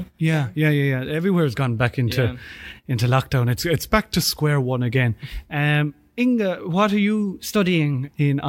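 At 3.60 s, after "yeah into lockdown", the speech slows about 6% and drops roughly a semitone. It snaps back at 4.42 s, before "one again". At 7.33 s, after "what are", it speeds up about 6% and rises a semitone until 7.94 s. Both are a drift correction step, likely from clock-matching software adjusting the playback rate.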